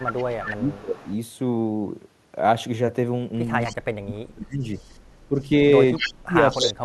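Speech suppressed in double talk runs from 0.0 to 1.08 s and echo leak from 0.0 to 1.15 s. The speech dips by up to about 25 dB while a delayed copy of the other voice trails 244 ms behind at about 10 dB down. Both sides were likely talking at once: the echo canceller, unable to tell the near talker from the loudspeaker echo, turned everything down and still let some echo through. From 3.6 to 3.76 s a fainter echo leak appears, about 20 dB down and again 244 ms late, followed by suppression from 3.67 to 4.63 s that cuts the speech by up to about 35 dB. From 4.75 to 6.73 s the echo leak is at its strongest, only about 5 dB below the speech. Overlapping it, from 5.29 s to the end, the speech again drops by up to about 35 dB.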